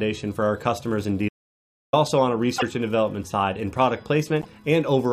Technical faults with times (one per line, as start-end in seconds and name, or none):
1.29-1.93 audio dropout to silence
2.57-2.63 broken MP3 bit reservoir
4.40-4.46 broken MP3 bit reservoir